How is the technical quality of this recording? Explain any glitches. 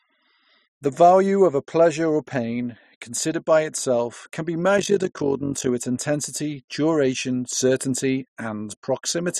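One fault stands out in this speech recording. Between 4.78 and 5.70 s, overlap-add ripple appears: frames were rejoined with overlapping windows that don't sum to a steady gain, so level dips about 11 dB roughly fifty times a second, giving a rough flutter.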